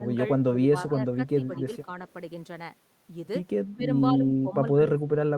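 At 0.0 to 0.07 s, 0.51 to 1.67 s and 3.76 s to the end, the speech dips by up to about 15, 10 and 20 dB, showing as notched envelope, likely speech suppressed in double talk by an echo canceller. From 1.27 to 1.61 s, a faint copy about 30 dB down trails 207 ms behind, visible as a weak repeated smear: likely echo leak.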